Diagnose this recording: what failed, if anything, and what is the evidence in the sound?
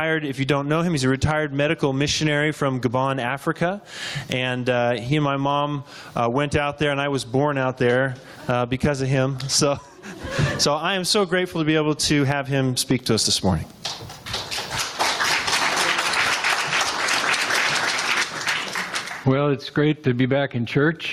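Gain pumping runs through the whole recording. The gain swings around 20 dB. Loud and soft parts sit squashed together. The likely cause is input gain set far too high, clamped by a fast limiter in processing.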